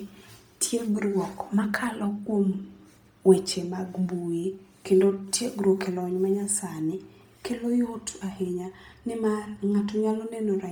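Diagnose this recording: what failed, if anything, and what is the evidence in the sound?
Bluetooth LC3 compression throughout, at the codec stage: the speech has a heavy grainy, breathy edge, likely LC3 near 32 kbps noise-filling its discarded upper spectrum.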